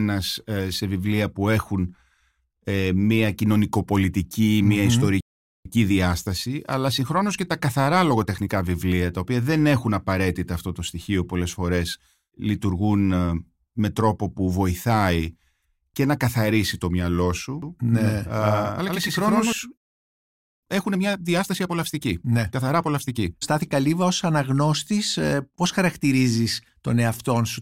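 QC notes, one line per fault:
5.21–5.66 s, playback stall: the speech cuts out for about 0.45 s, then resumes. The player likely ran short of data or was blocked.
5.66–8.66 s, time-compressed catch-up: the speech runs 1.1 times fast at normal pitch, as small pieces are cut and cross-faded to clear the backlog.
17.62–19.52 s, doubled audio track: a second full-band copy, about as loud, trails about a tenth of a second behind. It is dry and starts and stops abruptly, likely from a second, slower capture path.
19.77–20.63 s, playback stall: the speech stops for about 0.85 s before continuing, likely because the output starved or its thread stalled.
20.63–23.63 s, time-compressed catch-up: the speech is hurried to 1.25 times speed without a pitch change, by splicing and cross-fading small fragments.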